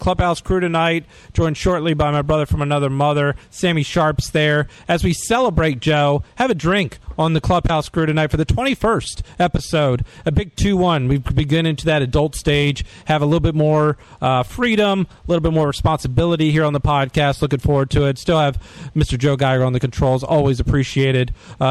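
Across the whole clip the loudest moments carry a gritty crackle, with a brittle edge riding on each peak rather than a constant fuzz. This is hard clipping: the signal was driven about 7 dB beyond what one stage in the chain could pass, so the tallest waveform peaks were sheared flat. Only a small share of the audio, somewhere around one or two percent, goes over the limit, which is why the distortion clusters on peaks. The flattened tops add high harmonics that produce the harshness.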